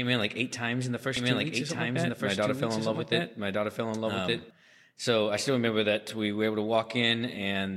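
From 1.17 to 4.51 s, after "eight times in the", a doubled audio track appears: an equally loud copy trailing about a second behind, likely from a second capture path. Unlike echo, it never decays.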